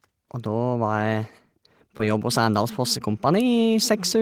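A 20 ms stretch of the call missed the decoder, producing short concealed packet loss from 1.97 to 2.00 s, heard as a brief smear where the gap was patched over.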